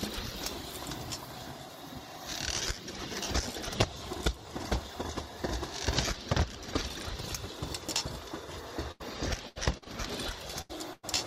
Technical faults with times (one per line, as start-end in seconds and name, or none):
8.91-9.04 burst of packet loss
9.49-9.57 burst of packet loss
9.77-9.90 short concealed packet loss
10.61-11.05 burst of packet loss